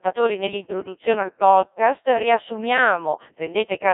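Throughout, the speech sounds robotic and buzzy, confined to a narrow band with nothing above about 3.8 kHz. This is the Codec 2 vocoder at heavy damage, which fits a 1.6 kbit/s mode: only pitch, voicing, energy and a spectral envelope survive, rebuilt from sine waves.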